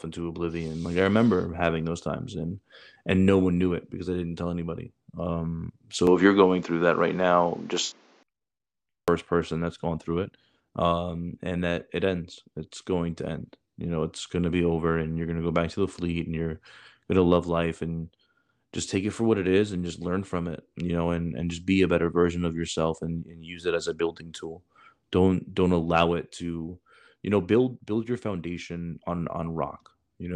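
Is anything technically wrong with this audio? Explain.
Yes. From 6.07 to 8.23 s the input likely switched to a poorer device, with the system handing capture to a different microphone or a headset's call profile. That path carries nothing above 7.6 kHz, so the speech turns duller and boxier. Its level shifts by about 5 dB, and a new background noise appears well below the speech, roughly 35 dB down. The change happens without any gap at the switch.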